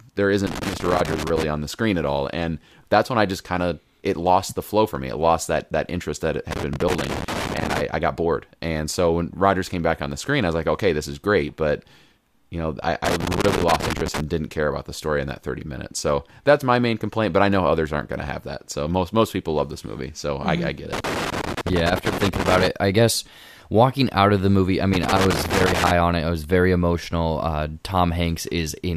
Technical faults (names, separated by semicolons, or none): loose connector crackle